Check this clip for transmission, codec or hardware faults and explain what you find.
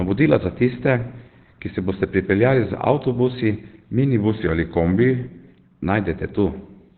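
One codec fault runs through the whole clip.

Opus compression, throughout: likely a very low bitrate forcing the encoder into narrowband speech mode, leaving nothing above 4.3 kHz and a muffled, hoarse sound.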